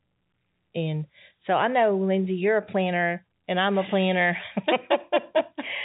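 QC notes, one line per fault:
No faults found; G.711 telephone band sounds as expected.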